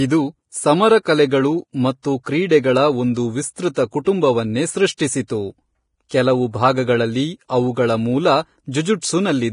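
Vorbis compression is heard throughout this speech, likely from a low-bitrate encode near 30 kbps. Nothing survives above 10.5 kHz, and coarsely quantised treble turns heavily hissy and grainy.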